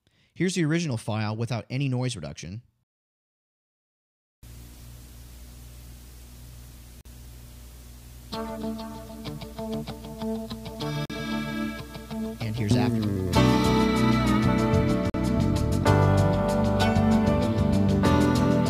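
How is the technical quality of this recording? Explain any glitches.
The recording is interrupted three times by short, hard-edged silences at 7.01, 11.05 and 15.10 s, each 44 ms long and exactly 4 s apart. This is a gap between chunks: the audio arrived in 4-second pieces, and silence was inserted at each join, cutting the sound abruptly without losing any of it.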